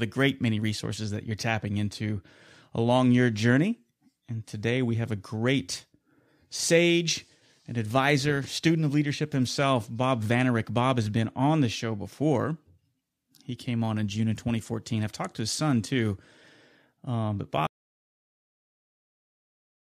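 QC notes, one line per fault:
17.67 s to end: audio dropout to silence. The speech cuts off mid-flow and never returns; with no room tone left, the input was likely lost while the recorder kept writing silence. The waveform becomes a flat line, and the spectrogram goes blank.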